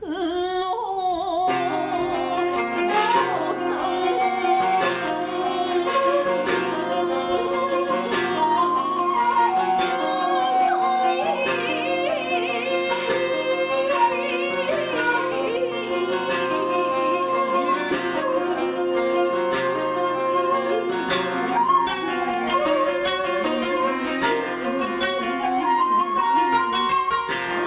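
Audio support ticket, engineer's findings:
No faults found on listening; nothing to trace to any component in the playback or capture chain.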